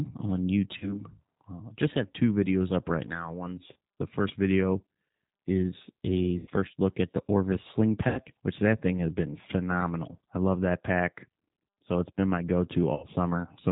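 From the first second the speech carries the G.729 codec, plainly audible at 8 kbit/s. Each 10 ms frame is rebuilt from a vocal tract filter, a pitch estimate and a handful of pulses, so the voice sounds slightly rough and synthetic. On a spectrogram, energy stops at a hard ceiling near 4 kHz. Harmonics look smeared and granular rather than clean, and the waveform lacks fine detail between pitch pulses.

VoIP packet loss concealed by the speech codec interrupts the speech five times. The spans are 0.78 to 1.05 s, 3.73 to 3.76 s, 6.38 to 6.50 s, 8.08 to 8.20 s and 12.94 to 13.06 s. The first two fit a single lost 30 ms stretch, and the last three fit about 90 ms each. The decoder repeats its last pitch and filter at falling gain, so the sound stretches into a buzzy tone or coloured noise that fades. The first event lingers longest, because recovery carries on after audio resumes. A spectrogram shows flat, repeated harmonic bands dimming, and the waveform shows a tapering periodic envelope.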